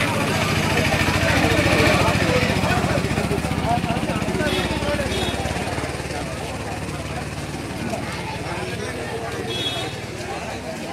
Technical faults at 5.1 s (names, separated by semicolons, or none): none